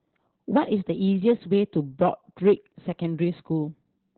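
Speech throughout the clip carries heavy Opus voice compression in its SILK speech mode, and nothing survives above about 4.2 kHz, so the voice sounds muffled, hoarse and faintly robotic. The narrowband cut-off and the coarse, buzzy excitation fit a bitrate near 8 kbps. Plain low-pass filtering would dull the top end just as much but leave the voice smooth; here the grainy, synthetic texture shows the codec rebuilding the voice from a simplified model.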